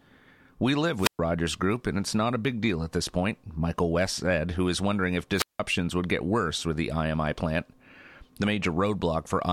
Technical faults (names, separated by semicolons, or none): wireless microphone squelch dropout